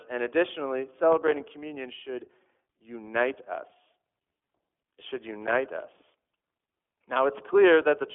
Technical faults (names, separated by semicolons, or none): iLBC codec; processor overload crackle